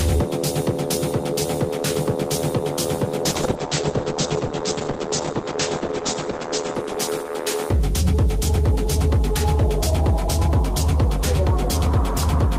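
A call bitrate drop runs from 3.26 s to 7.83 s. The call's bandwidth estimate fell and the encoder was pushed to spend far fewer bits, which fits a fall from about 32 kbps to around 10 kbps. Coding turns coarse, and the top end is cut from 20 kHz down to 8 kHz, so the sound goes muffled and rough, with a watery smear. It stays at its worst for about 3.2 s before the bitrate recovers.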